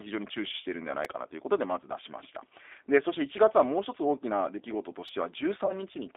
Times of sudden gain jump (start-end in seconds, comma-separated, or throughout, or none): none